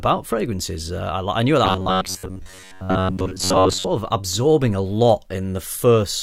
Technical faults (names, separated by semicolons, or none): robotic sound from repeated short buffers